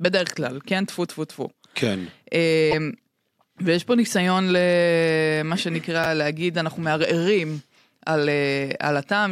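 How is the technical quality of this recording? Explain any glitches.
The recording has two brief technical glitches, one in each half of the speech and both only a few hundredths of a second long.

From 2.71 to 2.74 s, a short stretch of about 30 ms comes out as a chirp or noisy blip where the speech should continue. The likely cause is a broken MP3 bit reservoir: data was lost, and the next frame reached back for borrowed bits and decoded someone else's bytes. The span fits a single 26 ms MP3 frame.

At 6.04 to 6.06 s, the chunks are out of order. One block of audio arrived a step late and played after the block that should have followed it, which fits 10 ms chunks. No sound is lost, but the swap leaves hard joins that are heard as a tiny jumbled flicker.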